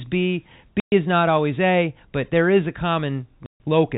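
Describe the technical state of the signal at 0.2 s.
At 0.2 s the speech is intact, with no fault, carried through G.711 telephone coding that stops everything above 4 kHz and leaves only faint level-following quantisation noise.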